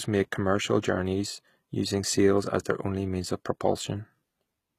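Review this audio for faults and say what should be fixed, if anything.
Throughout the speech, the treble sounds synthetic. S sounds turn gritty and lispy, and nothing is heard above 14.9 kHz. This is likely HE-AAC compression at a low bitrate, consistent with about 20 kbps. The upper band is copied from lower bands rather than coded, so its harmonics don't line up. To prevent it, encode at a higher bitrate or use plain AAC.

At 2.64 s, between "using sails as" and "their only means of", a brief hiss of about 10 ms comes just before an attack. This is pre-echo. The codec spread its quantisation noise across the whole block, so noise sized for the loud onset also filled the quiet moment before it. To prevent it, raise the bitrate so the encoder has room to switch to short blocks at sharp onsets.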